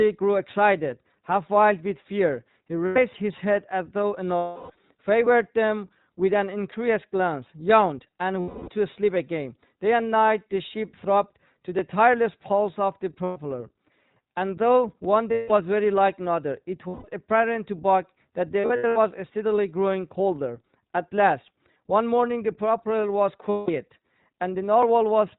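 A speech recording carried through the iLBC codec, with plainly audible coding damage throughout. The band stops at 4 kHz, so the sound is dull and muffled, and the voice has a slightly rough, synthetic texture from each short frame's excitation being coded on its own. The character fits iLBC's 15.2 kbps mode with 20 ms frames. On top of this are eight spots of lost iLBC frames, where the decoder fills the gap by repeating the last pitch cycle blended with noise, heard as a held, faintly buzzy vowel. They fall at 2.86–2.99 s, 4.37–4.72 s, 8.40–8.70 s, 13.24–13.39 s, 15.32–15.52 s, 16.88–17.06 s, 18.60–18.98 s and 23.50–23.70 s. The longest, at 4.37 s, runs about 340 ms and sags as the concealment fades. At 18.60 s the losses are broken into short bursts, the longest around 70 ms, spread across that span. After each gap the voice recovers almost immediately because every frame decodes independently.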